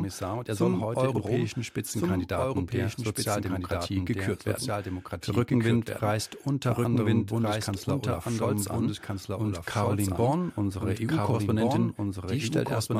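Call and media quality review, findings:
Doubled audio track, whole clip: the speech plays twice, a second full-band copy trailing about a second and a half behind at roughly the same level, so everything overlaps itself. No decay or room colour on the copy, so it's not an echo. Likely cause is the same signal captured again via a slower path, or an edit leaving two copies out of step. Worth checking routing and mix for a duplicate feed.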